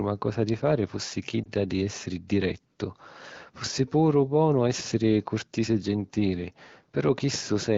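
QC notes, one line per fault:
1.44–1.49 s, lost AMR speech frame: a brief dip or warble, not a silent gap, as the decoder repeated its last good settings at falling gain, fitting a single lost frame.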